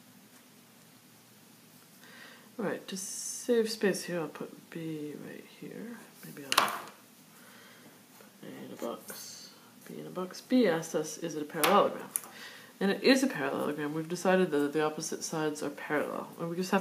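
No technical faults can be heard anywhere in this audio.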